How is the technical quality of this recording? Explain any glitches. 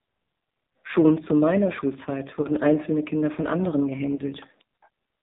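Technical quality is pretty rough: it's heavily coded mobile-call speech with two brief dropouts.

AMR narrowband mobile codec, throughout: everything above 4 kHz is gone, and the voice comes out buzzy and synthetic. That degree of damage fits a low AMR-NB mode around 5.9 kbps, where the few pulses per subframe can't capture much detail.

Lost AMR speech frames, at 2.42–2.48 s and 4.16–4.21 s, the second just after "von anderen": each is a short dip or warble, consistent with one dropped 20 ms frame. The decoder patches the gap by replaying the last good pitch and vocal tract settings at lower gain.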